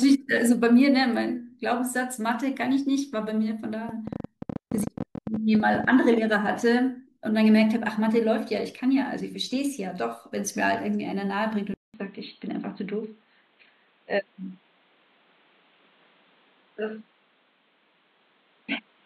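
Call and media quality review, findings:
Train of clicks, 3.89 to 5.85 s: about 30 irregular ticks, roughly 14 per second, peaking a few dB above the speech. They show as thin vertical spikes, likely from interface or interference pulses.

Input switched to a poorer device at 11.74 s through the end: 200 ms gap, then dull band-limited sound with nothing above 4.3 kHz. The spectrogram shows a hard ceiling and a new noise floor about 40 dB down, level unchanged, likely from a headset call profile.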